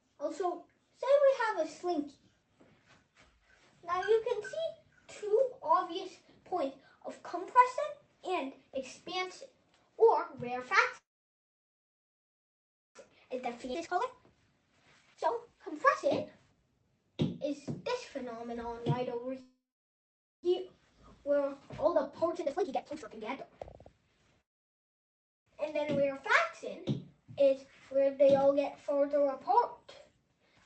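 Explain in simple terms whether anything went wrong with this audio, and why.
Yes, three kinds of fault occur.

Call audio freeze: data was likely held up in transit and the buffer ran dry, so the sound stops and goes almost silent at 10.97 to 12.97, 19.41 to 20.45 and 24.41 to 25.48 seconds.

Jitter buffer speed-up: after the first two hold-ups the receiver trims tiny slices to catch up, so the sound runs hurried at 13.09 to 16.30 (about 26% fast) and 21.47 to 24.09 seconds (about 39% fast).

Skip ahead: at 13.73 to 13.76 seconds roughly a second of audio is thrown away, and playback jumps straight forward with almost no gap.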